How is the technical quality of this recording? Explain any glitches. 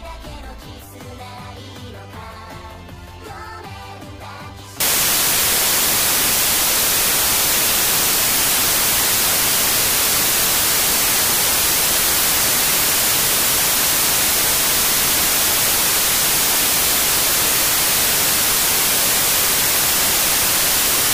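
Poor, because from 4.80 s right through to the end the audio collapses into loud hiss. That's samples built from the wrong bytes: the reader is assembling each sample's bytes incorrectly, whether it's shifted by a byte, has the byte order swapped, or is assuming the wrong alignment. The rapidly changing low bits end up as the big part of every value, so you get loud, harsh broadband noise.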